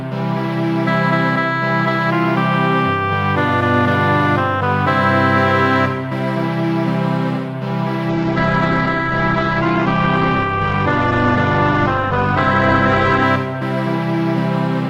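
From 8.11 to 13.31 s a call bitrate drop to roughly 9 kbps leaves the sound coarse and muffled, cut off at 8 kHz.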